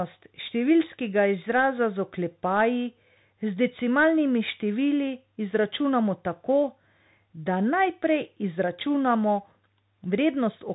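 Speech running through a Bluetooth CVSD headset codec for its full length. Nothing above 3.8 kHz survives, and the one-bit delta coding, which fits a 64 kbps stream, is plainly audible. The adaptive step lags on loud high sounds, distorting them, roughening s sounds, and leaving granular hiss.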